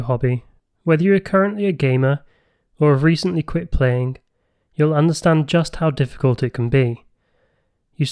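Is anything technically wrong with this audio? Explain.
No, nothing is technically wrong with this audio.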